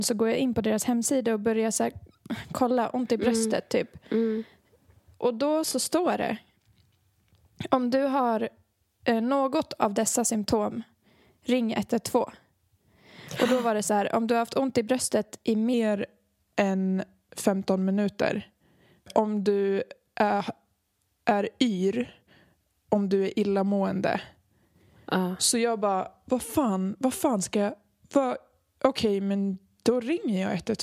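From 15.74 s, right after "ont i bröstet i", to the end, the speech runs at about 0.92 times speed and drops about 1.5 semitones, which fits 48 kHz audio played back at 44.1 kHz: a wrong sample rate. Unlike pitch shifting or time-stretching, tempo and pitch sag together.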